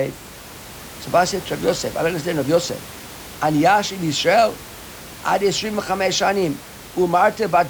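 No technical faults occur at any point in this speech clip; the room's background noise sits about 18 dB below the speech and is part of the recording.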